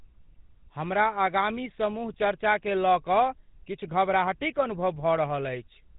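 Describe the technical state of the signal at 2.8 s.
At 2.8 s the speech carries GSM full-rate codec damage, as it does for the whole clip. The damage is plainly audible. The codec models the vocal tract and drives that model with a sparse train of regular pulses, keeping only part of the excitation. That gives the speech a buzzy, gravelly roughness. Nothing passes above 3.8 kHz, so the top end sounds dull and boxed in. The coarseness fits a 13 kbps rate.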